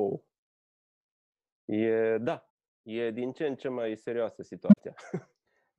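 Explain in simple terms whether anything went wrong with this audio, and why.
Right after "în ce mai serioasă", from 4.69 to 4.80 seconds, something goes wrong with the speech. This is a corrupt frame concealed. A few compressed chunks of audio arrived damaged. The decoder noticed and smoothed over them instead of playing noise.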